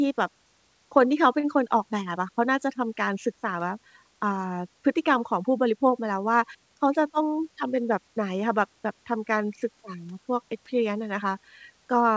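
At 1.40 to 1.46 s one sound is held about 34 ms too long with a slight buzz or dip. This is a short stall from a late packet: the jitter buffer ran dry, so the last sound was stretched until the packet arrived. From 6.76 to 7.22 s the speech runs hurried, about 108% speed at unchanged pitch. This jitter buffer speed-up trimmed roughly 40 ms in small pitch-period cuts to reduce excess delay. Throughout, the call codec passes nothing above 8 kHz.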